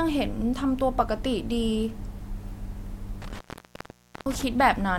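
A speech recording with an intermittent contact fault between 3.22 and 4.43 s, where a loose plug or cable connection briefly opens and the signal drops out for about 0.87 s. The break is bounded by crackle as the contact scrapes open and closed, and faint hiss remains while the line is open. On a waveform the speech envelope collapses to a thin noise floor, with spiky bursts at each edge. A spectrogram shows broadband vertical streaks at those edges.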